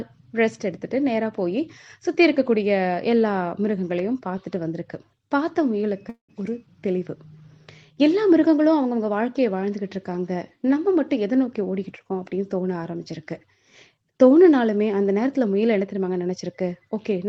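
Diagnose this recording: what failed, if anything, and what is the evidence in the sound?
Network stage: at 6.09–6.31 s the sound trails into a fading buzz, then goes silent before resuming. This is a long network dropout, likely packet loss the receiver concealed.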